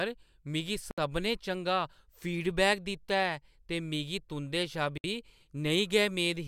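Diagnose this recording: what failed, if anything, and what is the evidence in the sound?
Gaps at a join of encoded pieces appear at 0.91 to 0.98 s (about 67 ms) and 4.98 to 5.04 s (about 64 ms), four seconds apart. The speech stops abruptly, then resumes exactly where it left off. At the codec stage, separately encoded segments were concatenated untrimmed, leaving encoder delay and final-frame padding as silence.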